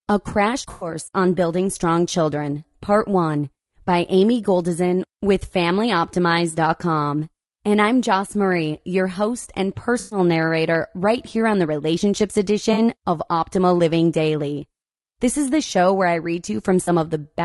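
Low-delay AAC compression runs through the whole speech clip: the voice sounds rough and grainy, with noise filling the gaps between harmonics and a thin, synthetic top band. This is likely AAC-ELD at a bitrate around 32 kbps, whose short frames resolve pitch poorly.

AAC frame loss with concealment appears at 0.71 to 0.89 s (100 ms), 9.99 to 10.19 s (120 ms), 12.73 to 12.79 s (40 ms) and 16.83 to 16.89 s (40 ms). The decoder rebuilds each missing stretch from the last good spectrum, leaving a smeared, noisy or phasey patch.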